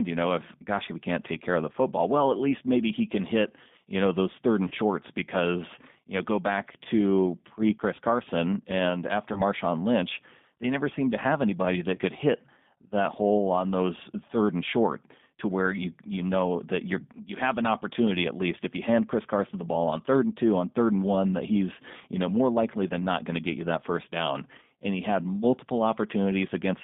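Throughout, the speech sounds slightly rough and synthetic, confined to a narrow telephone band of about 150 Hz to 3.6 kHz. This is the G.729 codec at 8 kbit/s, rebuilding each 10 ms frame from a vocal tract filter, pitch predictor and a few pulses.

At 4.68–4.74 s, after "you know those third" and before "because you know go", then at 9.33–9.42 s after "and after", and at 11.95–11.99 s between "seemed to have anybody" and "could hit that hole", the sound briefly smears into a buzzy tone or coloured noise that fades. Each is VoIP packet loss concealed by the speech codec: about 30 ms went missing, which fits a single lost packet, and the decoder extended its last pitch and filter at falling gain.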